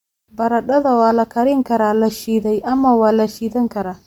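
The clip is speech, and plainly audible Bluetooth LC3 compression damage runs throughout: the upper spectrum sounds thinned and replaced with a breathy, grainy noise texture that clings to the voice, while the band still extends up to about 20.1 kHz. The likely cause is an LE Audio link at a moderate rate, around 48 kbps with 10 ms frames. That noise-filled, full-width top is what separates it from older SBC or MP3 damage, which leaves a hard low-pass or metallic swirling instead.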